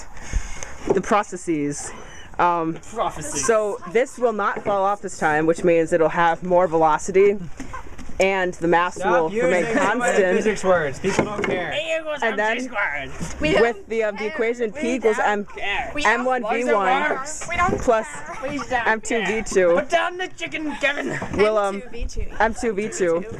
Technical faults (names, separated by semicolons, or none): none